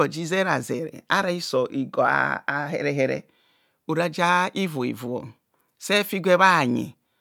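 No technical faults can be heard anywhere in the speech; the signal holds steady and intact across its whole duration.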